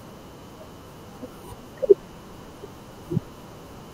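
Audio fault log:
2.88–3.02 s, frames out of order: two neighbouring runs of about 72 ms each, which fits three frames apiece, arrived swapped and were decoded that way. The speech there plays with its halves exchanged, a garbled flutter, and no time is lost.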